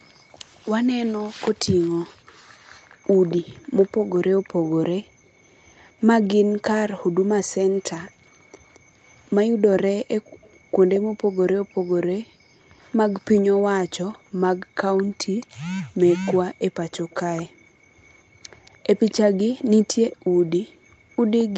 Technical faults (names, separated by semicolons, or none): echo leak